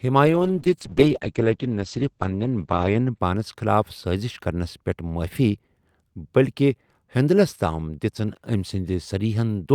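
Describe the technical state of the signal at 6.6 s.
At 6.6 s the signal is intact, with no audible dropout, distortion, glitch or other fault at that point.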